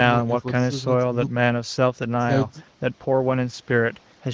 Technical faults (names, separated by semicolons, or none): none